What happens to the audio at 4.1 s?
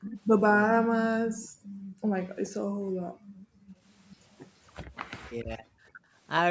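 From 4.11 to 4.16 s a brief, very faint echo leak appears: a scrap of speech returns about 422 ms late, likely because a far-end loudspeaker's echo canceller let some through. Unlike room reverberation, it is a separate delayed copy, not a smooth tail.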